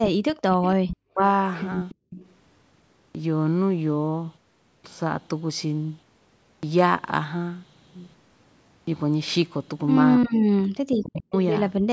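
Right from the start, 0.0 to 1.21 s, the speech keeps sinking and breaking up, dropping as much as about 40 dB for roughly 0.7 s in total. That's most likely speech suppressed in double talk: the canceller couldn't separate the talker from the far side and turned everything down.

Over the same opening stretch, 0.55 to 0.97 s, there's a faint delayed copy trailing 292 ms behind the speech, about 15 dB down. It comes back from 1.54 to 2.34 s, about 20 dB down. That's likely an echo leak, where the far end's canceller let some of its loudspeaker pickup slip back to us.

Inside that second echo stretch, 1.95 to 2.1 s, the room tone suddenly drops by about 35 dB for 150 ms and then returns. This is background gated by the echo canceller, which clamped the mic while the loudspeaker was playing.

Next comes the clipped start after a pause, at 3.11, 4.8, 6.59 and 8.83 s. Each time about 40 ms goes missing, so the speech jumps out of silence without its opening sound. 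It's the output device waking up late after the gap.

The clip ends with more speech suppressed in double talk from 10.18 to 11.35 s, again ducking by as much as about 40 dB for roughly a second in total. The likely cause is the same as at the start.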